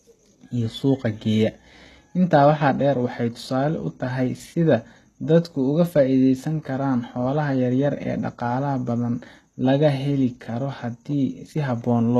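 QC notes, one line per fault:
throughout, HE-AAC compression: heavily gritty, metallic s sounds and nothing above 12.3 kHz, likely from treble copied up from lower bands at roughly 16 kbps.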